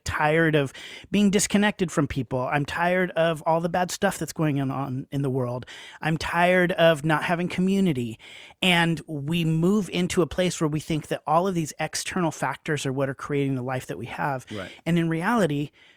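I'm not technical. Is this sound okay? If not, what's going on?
No, not quite. From about 0.13 s right through to 15.92 s there's a faint, steady ticking under the speech, roughly three ticks a second and around seventy in all. These are clock slip clicks. Two pieces of gear were likely each keeping their own time and drifting apart very slightly, so every third of a second or so a single sample gets dropped or doubled, and each slip makes a tiny tick.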